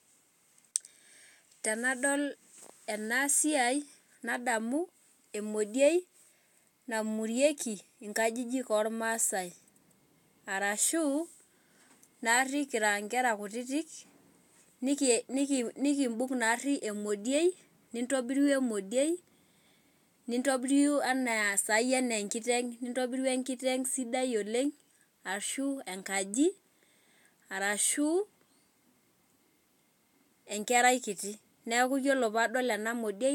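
No technical faults can be heard anywhere in the recording; the signal stays steady and intact throughout.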